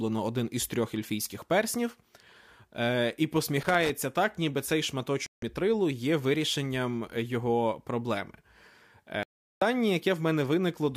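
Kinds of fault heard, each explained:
Loose connector crackle: a worn or dirty contact flickering on and off as it shifts, chopping the signal. Here there's an irregular scratchy burst from about 3.63 to 3.90 s, right before "так ніби цей", lasting roughly a quarter of a second.
Digital broadcast dropout: the receiver lost clean frames and muted until good data returned, so that stretch is simply gone. The speech cuts out for 160 ms at 5.26 s, between "так ніби цей" and "мітрилу є вирішенням його", then again for 384 ms at 9.23 s.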